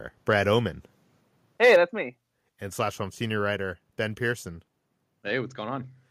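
From 1.63 to 1.76 s the speech turns harsh and crackly. The waveform shows peaks pressed flat against the converter's limit, with around a tenth of the samples in that stretch sitting at that limit, and the spectrogram shows a smear of broadband energy across the upper frequencies. The likely cause is microphone overload: the input was driven about 4 dB past what the converter could represent, so the tops of the loudest peaks were cut off.

At 1.76 s, just before "that's me", the level drops abruptly by about 4 dB, and the voice and the background fall together. On the waveform the envelope steps down in one move with no fade. On the spectrogram every band dims at the same instant, along a clean vertical edge. This is the microphone volume stepped down, likely because the call software reacted to the clipping a moment earlier by cutting the device's input gain in one step.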